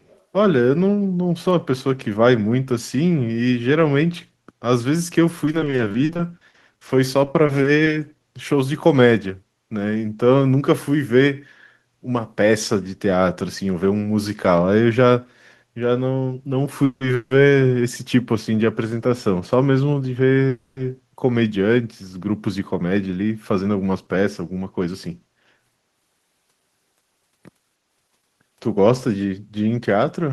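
Echo leak at 0 to 0.21 s opens this speech recording: a very faint delayed copy, about 35 dB down and 336 ms late, likely from a far-end loudspeaker whose echo canceller let some sound through. Repeated packet loss (robotic sound) from 5.45 to 7.89 s leaves the audio choppy, as about two dozen short holes, none over 50 ms, are patched by stretching the last sound, with 520 ms actually lost. Call audio freezes at 16.85 to 17.03 s, 17.15 to 17.33 s and 20.49 to 20.79 s each hold the last sound as a fading buzz for 160, 160 and 280 ms, likely while delayed packets are awaited. The speech then resumes where it stopped, with nothing missing but the delay increased. Jitter buffer speed-up from 22.82 to 25.09 s makes the speech run about 10% fast at unchanged pitch and sound hurried, as short pitch-period slices totalling roughly a fifth of a second are trimmed to shrink the backlog.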